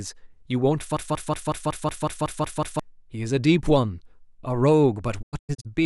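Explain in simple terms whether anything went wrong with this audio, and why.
Two things go wrong. From 0.97 to 2.8 s there's a broken-record loop: a tiny slice of speech, about 185 ms long, plays ten times in a row. The likely cause is a player or stream stalling and resending its last chunk, and the speech that should have been there is gone.

Then from 5.21 to 5.67 s there's a digital broadcast dropout. The receiver lost good data and went quiet in several short holes, the longest about 96 ms, with quick 20 ms fades. Roughly a quarter second of speech is missing in total.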